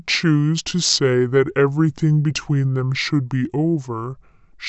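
From start to finish it's a wrong sample rate: speech runs at about 0.69 speed and 6.5 semitones low, which fits 32 kHz audio played back at 22 kHz.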